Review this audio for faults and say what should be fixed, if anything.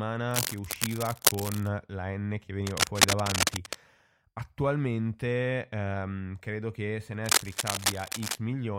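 Cable scratch noise runs from 0.31 to 1.68 s, 2.67 to 3.75 s and 7.24 to 8.36 s: dense, uneven bursts of scratching and rustling sit over the speech, roughly as loud as the voice in the first and last stretches and somewhat louder in the middle one. The likely cause is a worn cable, connector or control being moved, so its contact resistance jumps around rapidly and injects crackling noise into the signal path. Replace or reseat the suspect cable and connectors, clean any worn controls, and keep the cabling still while recording.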